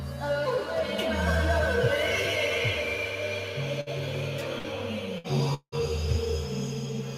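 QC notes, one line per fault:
Throughout: noise suppressor applied to music. A speech-tuned suppressor treats sustained tones and reverb tails as noise, so attacks pass while held parts sink by about 5 dB, giving a pumping, thinned sound. The spectrogram shows tails cut short and the waveform envelope dips between onsets.
3.81, 4.58 and 5.18 s: burst of packet loss. Each time roughly 60 ms of audio went missing. The receiver extended the last sound for about 56 to 60 ms, fading it, then playback resumed further on. The spectrogram shows smeared, repeated frames and a small jump where the music restarts.
5.54 to 5.75 s: long network dropout. The last sound is stretched and fades for about 0.18 s, then about 70 ms of silence follows before the music returns with roughly 180 ms lost. The likely cause is a stall in network delivery. The waveform shows a decaying stretch, a flat gap, then an abrupt restart.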